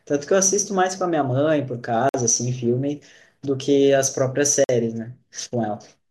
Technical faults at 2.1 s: gap between chunks

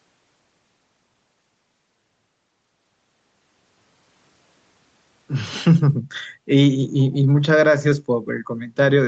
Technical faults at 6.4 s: background gated by the echo canceller

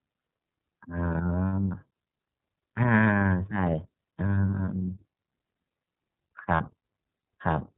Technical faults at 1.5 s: iLBC codec; lost iLBC frames

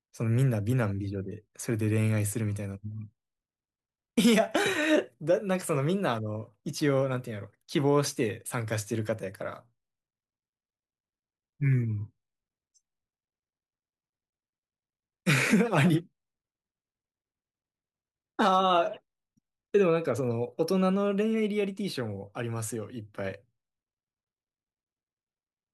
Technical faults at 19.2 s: none

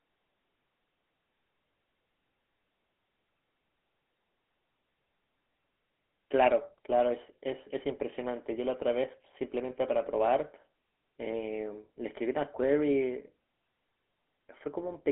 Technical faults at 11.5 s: GSM full-rate codec

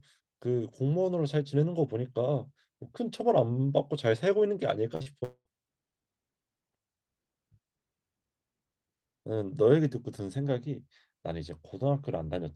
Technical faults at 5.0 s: burst of packet loss; short concealed packet loss

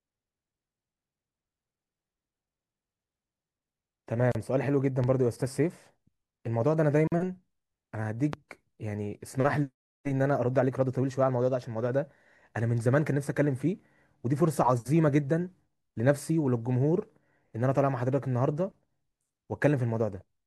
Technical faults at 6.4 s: none

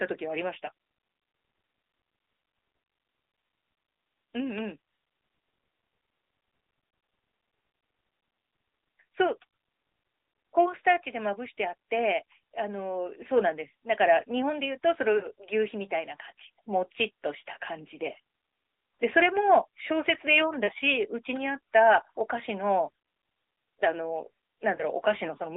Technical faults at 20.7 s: lost AMR speech frames

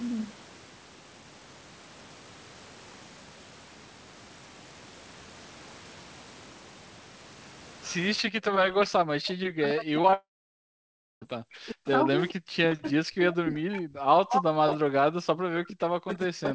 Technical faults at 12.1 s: speech suppressed in double talk

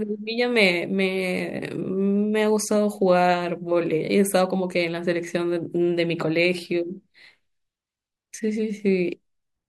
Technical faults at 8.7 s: none

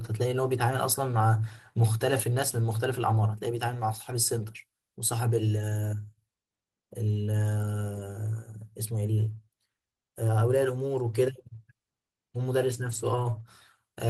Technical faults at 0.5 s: lost packet rebuilt from error correction

